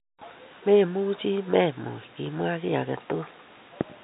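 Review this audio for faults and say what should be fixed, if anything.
Nothing here needs fixing; no faults were found.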